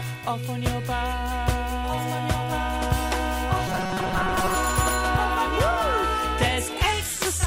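From 3.68 to 4.55 s the audio turns into a rigid, metallic buzz locked at 188 Hz, which still loosely tracks the shape of the sound underneath. This is robotic sound from repeated short buffers. The likely cause is audio arriving too seldom to keep up, with the playback filling each gap by looping the last chunk of roughly 5.3 ms while fresh material is skipped. That fixed repeat period imposes the steady pitch, and about half of what is heard in that span is recycled rather than new.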